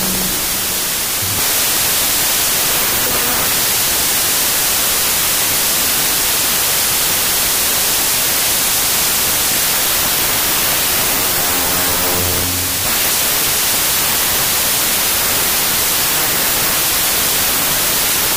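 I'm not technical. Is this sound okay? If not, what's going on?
No. The whole clip has a wrong sample width fault. Audio stored with three bytes per sample is being read as two, so many values are built from mismatched bytes. You hear loud noise with the real sound buried inside, playing at two-thirds speed and lower pitch.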